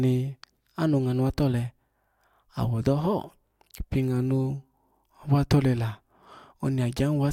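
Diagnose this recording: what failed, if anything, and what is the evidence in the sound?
At 2.83 s the speech makes a tiny forward jump. This is compressed frames skipped at the codec stage: about one frame, roughly 20 ms of audio, was missing or rejected as damaged.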